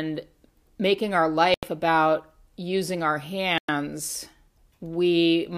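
Speech with two brief dropouts to silence, at 1.54 s for about 86 ms and 3.58 s for about 105 ms, that resume cleanly, likely Bluetooth stalls from a drained headphone buffer.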